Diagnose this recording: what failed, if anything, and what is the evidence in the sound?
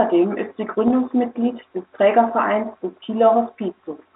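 Packet loss with pitch repetition, at the network stage, occurs between 0.88 and 0.90 s. For about 20 ms the speech turns into a briefly held, slightly buzzy tone, and then the normal signal returns. The gap length fits a single lost packet. The receiver's concealment bridged it by repeating the last pitch period, so the loop briefly freezes the sound. The loss is too short to fade to silence. The telephone band of roughly 250 Hz to 3.5 kHz from the G.711 coding is heard on either side.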